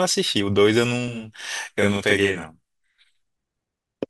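It's a short speech clip with a channel delay (doubling) from 1.08 to 2.98 s. One channel lags by 40 ms, so the mono sum gives an equal-level slap copy.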